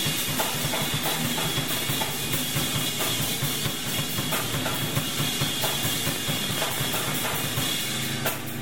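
A train of clicks runs from 6.09 to 7.47 s: about twenty near-identical pulses at a regular 14.7 per second, peaking roughly 10 dB above the music. The even ticking most likely comes from electrical interference or a faulty connection or power supply injecting repeated spikes.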